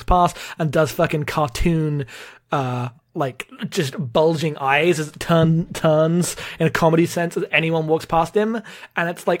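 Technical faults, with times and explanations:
No technical faults detected.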